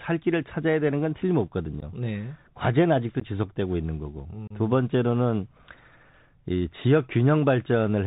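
Throughout the clip, the speech runs through a Bluetooth CVSD headset codec, likely a 64 kbps link. Nothing above 4 kHz passes, so the speech sounds plainly narrow, with scratchy sibilants and a granular hiss beneath.

At 1.80 to 1.83 s and 3.20 to 3.23 s, and again at 4.47 to 4.52 s, there is unconcealed Bluetooth headset packet loss. About 15 ms, 15 ms and then 30 ms of audio drop out, which fits a couple of packets, then about four, being lost. Each gap has abrupt edges, and the speech returns quieter for a moment.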